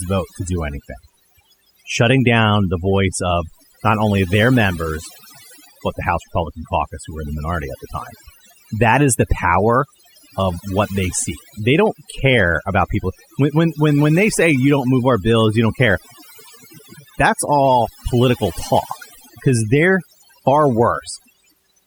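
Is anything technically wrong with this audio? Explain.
Yes. Overdone noise removal affects the whole speech clip, from start to finish. A noise reduction process was applied far too aggressively. Each frequency band that came close to its estimated noise level was pulled sharply down or muted outright, and the quieter parts of the voice fell below that line and were cut along with the noise. What remains is a background of near silence dotted with twinkling specks.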